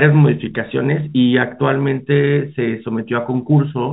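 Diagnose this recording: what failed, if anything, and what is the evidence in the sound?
Nothing stood out on listening to the speech; no stage of the chain shows a failure.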